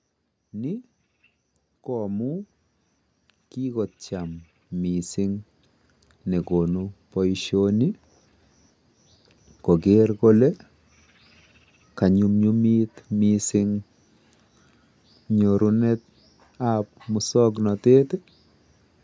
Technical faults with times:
0.54-7.58 automatic gain rising

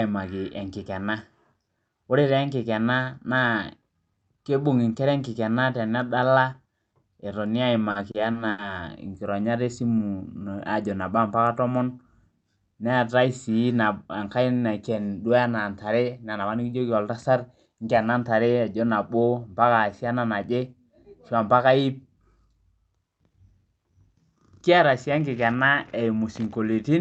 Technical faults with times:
7.91-8.60 repeated stalls (stutter)
9.87-10.57 jitter buffer slow-down
12.56-13.56 jitter buffer speed-up

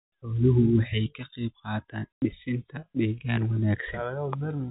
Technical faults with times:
2.19-2.22 packet loss filled with silence

